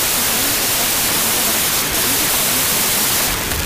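From start to finish the speech sits buried under loud, harsh noise, running 1.5 times too fast, so it sounds high-pitched and hurried. This is a wrong sample width fault: audio written as 16-bit integers is being read as packed 24-bit integers. Each value is stitched together from mismatched bytes, and only some carry the real signal's top bits. With three bytes consumed per sample instead of two, everything plays back faster.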